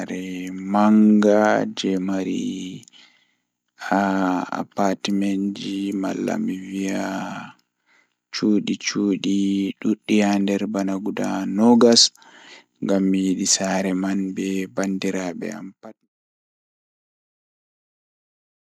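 No technical faults are audible in the speech, and the smooth fade-out from about 15 s to 16.09 s is an ordinary editorial ending with no click or hard edge.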